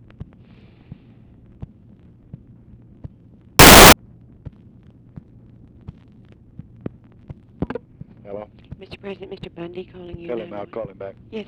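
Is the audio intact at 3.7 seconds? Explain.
No. At 3.7 seconds the audio is hit by samples built from the wrong bytes, a fault running from about 3.59 to 3.93 seconds. The reader assembles each sample's bytes incorrectly. It may be off by one byte or have their order swapped. The rapidly changing low bits then land in the most significant position. The result is a burst of loud, harsh broadband noise replacing the sound for about a third of a second.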